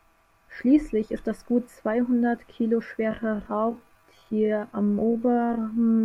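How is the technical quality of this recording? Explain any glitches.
The recording has one clear fault: a time-stretched section from 3.05 s to the end, where the speech suddenly drops to about 0.53 times its original pace while the pitch stays put. The likely cause is software stretching that part to fill a length, preserving pitch by repeating short slices of audio. The result drags. On a spectrogram, harmonics keep their frequency but syllables widen horizontally. On the waveform, the envelopes grow longer.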